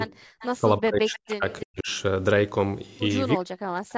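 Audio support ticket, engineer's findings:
Echo leak at 0.39–0.47 s and 1.50–1.64 s: faint delayed copy of the speech, about 25 to 30 dB below it, lagging by 333 ms and 313 ms. Likely far-end loudspeaker pickup that the echo canceller did not fully cancel, returned down the line.

Speech suppressed in double talk at 0.58–1.45 s, 1.61–1.89 s and 3.37–3.97 s: talker level dips by up to about 40 dB. Likely the echo canceller's suppressor mistaking overlapping near-end speech for echo and attenuating both.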